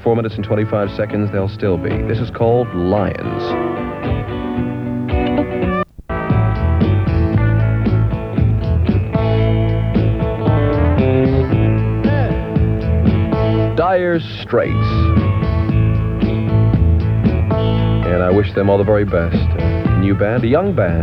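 No technical faults can be heard anywhere in the audio; the signal stays steady and intact throughout.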